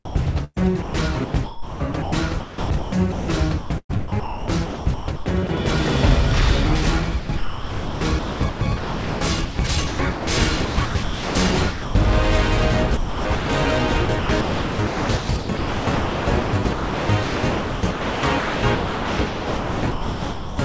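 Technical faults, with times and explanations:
0.05–5.49 s, 7.19–11.95 s, 12.97–13.49 s and 14.05–20.59 s, sound chopped by the voice detector: about 2.5, 2.7, 0.42 and 4.8 s of sound are replaced by comfort noise, so the audio cuts in and out. The likely cause is the sender's voice detector repeatedly switching transmission on and off.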